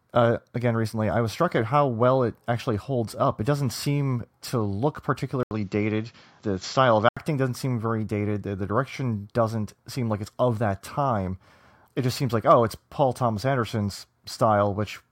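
The recording path in this speech clip likely switched its input to a poorer device partway through: after "doesn't seem to look", at 5.43 s, a gap of 80 ms opens and the sound turns duller, with nothing above about 7.6 kHz and a faint new background noise well beneath the speech at much the same level. The narrowed, boxier tone lasts until 7.17 s, when the original input returns just before "doesn't seem very dated".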